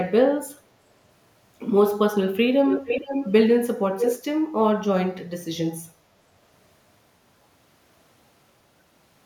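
From 2.67 to 3.32 s, a delayed copy of the speech returns about 453 ms behind the original, a few decibels below it: an echo leak. It comes back from 3.99 to 4.22 s at the same delay, now roughly as loud as the direct speech. The likely cause is a far-end loudspeaker whose echo canceller failed to remove what its microphone picked up, so that pickup was sent back down the line.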